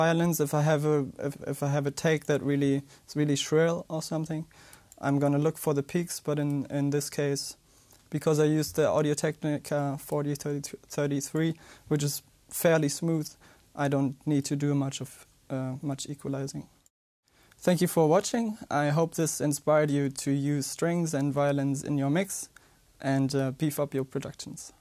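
No technical faults are audible.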